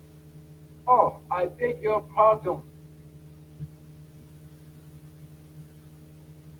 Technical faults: speech cut by the noise suppressor

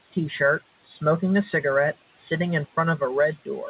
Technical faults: noise suppressor artifacts

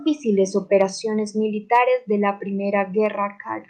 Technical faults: microphone overload

